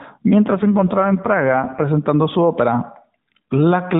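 From 0.46 to 1.84 s an AMR rate drop turns the speech rougher and more synthetic without any gap, which fits a switch from about 12.2 to 5.9 kbps.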